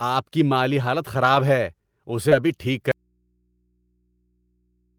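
Right after "کی مالی حالت", from 1.35 to 1.41 s, there's a lost packet rebuilt from error correction. Two packets went missing, but each following packet carried a low-bitrate copy, so the decoder played about 40 ms of those stand-ins instead of leaving a hole. You don't hear a gap, just a short patch where the speech turns rougher and a bit noisier than the audio around it.

Around 2.29 to 2.33 s, just before "ابھی ٹھیک", things get messier. First comes a short concealed packet loss. About 20 ms never arrived in time, and the receiver papered over it by extending the last bit of sound for roughly 19 ms before blending back into real audio. Overlapping its tail, from 2.31 to 2.33 s, one more packet was lost and rebuilt from error correction, adding another 20 ms of the coarser copy. Together they come across as a quick smear or wobble with a slightly grainy edge.

At 2.92 s the speech cuts out abruptly and never returns: an audio dropout to a faint residue that lasts to the end. 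What's left is mains hum sitting about 45 dB below the speech level. The cutoff is a hard drop rather than a pause or fade, which points to the source being lost while the chain after it stayed live, likely a break or disconnection upstream of an input that kept running and picking up hum.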